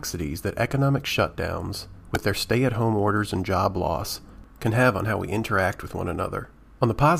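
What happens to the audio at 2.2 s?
At 2.15 s there is a repeated buffer. New audio arrived late, so the device replayed its last 1.3 ms piece four extra times, which fits a 64-sample buffer. The piece sounds five times in a row, with essentially no audio lost. Because the piece is so short, this comes across as a click or a brief buzz. On a waveform the same tiny shape appears copied back to back, with a hard join at each repeat. On a spectrogram the joins show as a thin vertical broadband streak.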